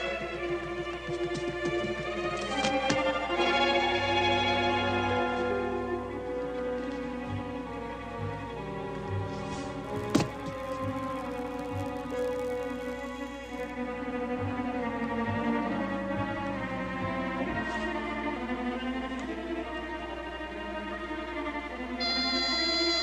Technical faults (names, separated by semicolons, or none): filter restarted on every block